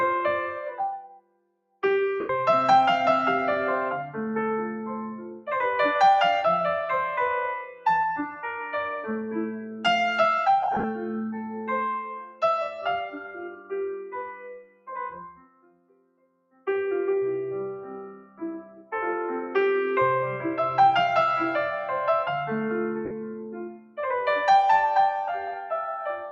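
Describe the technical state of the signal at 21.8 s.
At 21.8 s the audio sits under a noise suppressor applied to music or sounds, active across the whole clip. Built for speech, it treats sustained tones and decays as noise, letting onsets through while tails sink by around 10 dB. Unlike compressor pumping, the dips follow steadiness rather than loudness.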